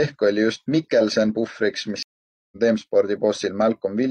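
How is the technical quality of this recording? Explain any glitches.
The recording has one clear glitch, a stream reconnect in the speech between 2.03 and 2.57 s. The connection dropped, so the player went silent for about half a second, then reconnected and started a fresh decoder mid-stream. When the speech resumes it has jumped ahead by roughly 0.4 s, so a short stretch is missing.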